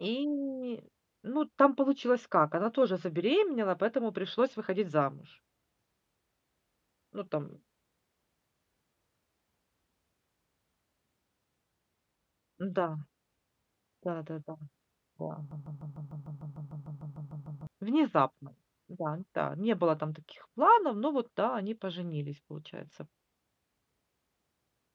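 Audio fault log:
15.51–17.67 s, broken-record loop: a 150 ms slice of the speech repeats exactly, back to back, 14 times, and the speech that should have filled those two seconds is never heard. The cause is likely a stalled player or stream resending the last fragment it held. Unlike an echo, each copy is identical and full level with no decay, and unlike a dropout the gap is filled rather than silent.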